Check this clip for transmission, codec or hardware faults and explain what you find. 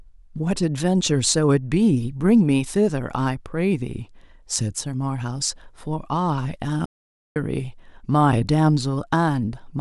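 One fault stands out in this speech clip: a playback stall. From 6.86 s to 7.36 s the speech cuts out abruptly in mid-flow and the output falls silent for about half a second, then resumes. The gap has no fade or noise, just dead silence that breaks the rhythm of the speech. The likely cause is the player running short of data, or its audio thread being blocked, so nothing reached the output until it recovered.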